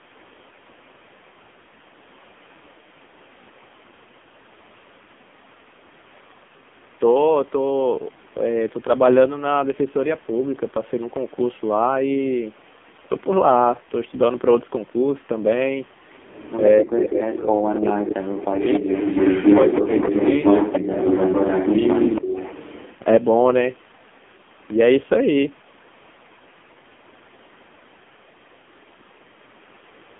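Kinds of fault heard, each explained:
AMR narrowband mobile codec: The whole clip passes through AMR-NB at about 5.9 kbps, a low-rate mode of the mobile speech codec that rebuilds the voice from a vocal-tract model. Damage is heavy, with a buzzy, synthetic quality, a 200 Hz to 3.5 kHz line band and nothing above 3.8 kHz.
Echo leak: A delayed copy of the voice returns 279 ms late, most likely an echo canceller at a loudspeaker end letting its microphone pickup through. Brief scraps appear at 17.31 and 17.95 s, then a sustained stretch from 18.65 to 22.95 s at roughly the level of the direct speech.
Speech suppressed in double talk: From 22.21 to 22.35 s, during the loud echo stretch, the voice dips by about 15 dB for roughly 150 ms. The likely cause is an echo canceller that could not separate talker from echo and turned both down.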